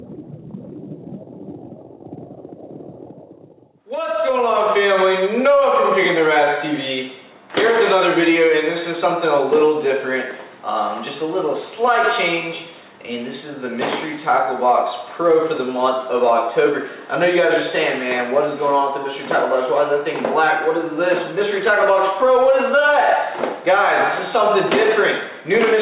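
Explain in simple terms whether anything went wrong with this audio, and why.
Nothing went wrong with this audio; it just has the narrower, telephone-like sound of the call connection it passed through.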